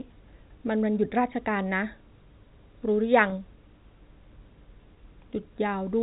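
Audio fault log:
3.30–3.32 s, packet loss with pitch repetition: a brief buzzy, held sound bridges a 20 ms gap, fitting one lost packet, with repeated pitch rather than silence or a click.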